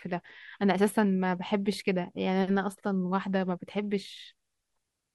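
No technical faults are audible.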